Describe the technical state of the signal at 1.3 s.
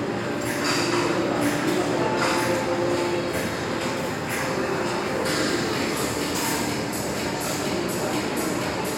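At 1.3 s the signal is intact, with no audible technical fault in the sound at that point.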